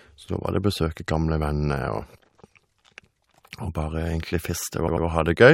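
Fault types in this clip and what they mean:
Repeated frames: Near the end of the speech, from about 4.87 to 5.05 s, the same short slice of sound, roughly 93 ms long, plays three times in a row, giving a brief mechanical stutter. That slice fits a run of a few compressed frames being written or sent more than once, so the decoder replays identical data. The two extra passes stretch the audio by about 186 ms.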